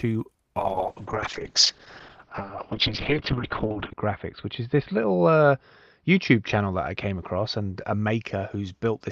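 From 0.59 s to the end, a call bitrate drop muffles the audio, with the top end narrowing from 20 kHz to 4 kHz, which fits the encoder falling from around 32 kbps to 7 kbps. A simple low-pass filter would only dull the sound, but here a rough, watery coding texture comes with it, worst for 3.34 s.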